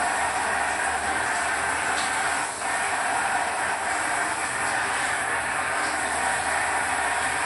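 A recording of everyday sound with MP3 compression audible throughout: nothing survives above 11.3 kHz, and the codec damage is plainly audible across the whole clip. This is likely due to an encoder starved of bits, which fits a low bitrate around 48 kbps.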